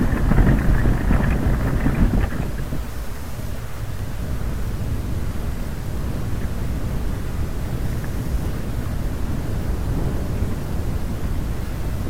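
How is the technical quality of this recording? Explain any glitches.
There is one glitch, near the end. From 11.67 to 11.71 s there is AAC frame loss with concealment: about 21 ms of coded audio never reached the decoder, which fits a single lost frame. The decoder patched the gap by reusing the last good spectrum, so the sound there is briefly smeared and noisy.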